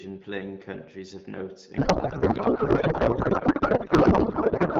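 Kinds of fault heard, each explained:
Codec payload misread: the two ends disagree on how the AMR bits are packed, so the decoder pulls fields from the wrong positions in frames that still look valid. Right after "playing countries of note", at about 1.77 s, the speech collapses into garbled noise and warble that barely follows it and carries on to the end. That fits octet-aligned AMR-WB frames at 12.65 kbit/s being unpacked as bandwidth-efficient, while the stretch before 1.77 s is clear speech.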